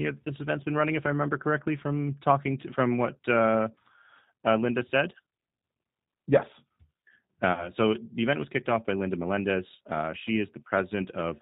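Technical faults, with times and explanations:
Throughout, G.729 codec: audibly rough, slightly synthetic speech with nothing above 4 kHz, consistent with 8 kbit/s G.729A rebuilding each frame from a filter, pitch and a few pulses.
7.53 to 7.70 s, VoIP packet loss concealed by the speech codec: a brief, fading smear as the decoder stretched its last pitch over 40 ms of lost audio, then recovered weakly.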